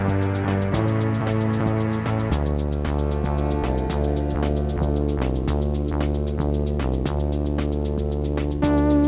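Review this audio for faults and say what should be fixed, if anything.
A train of clicks runs from 3.54 to 4.82 s: about ten near-identical pulses at a regular 6.3 per second, roughly as loud as the sound itself. The likely cause is nearby equipment interference or a faulty connection or power supply injecting spikes. To prevent it, move the recording setup away from interfering equipment, use shielded cables, and check the interface's driver and power supply.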